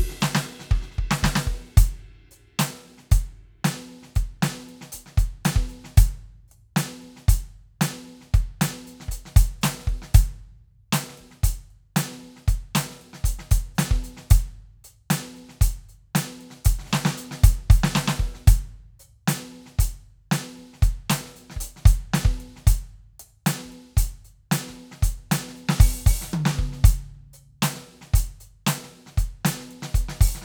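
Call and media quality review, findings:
No audible faults found.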